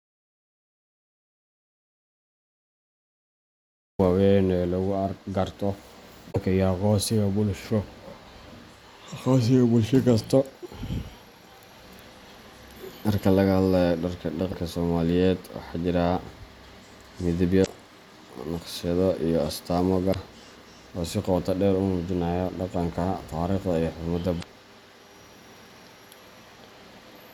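The input was likely lost before the recording began, so the recorder wrote only silence: an audio dropout to silence runs from the very start to 3.99 s, dead silence with no room tone, after which the speech enters mid-flow.

Later, damaged data in the compressed stream makes the decoder misread frames and lose sync. Each hit is a brief chirp, squawk, click or short hole of about 50 ms, at 6.31–6.36 s, 14.49–14.54 s, 17.62–17.68 s, 20.10–20.16 s and 24.39–24.44 s.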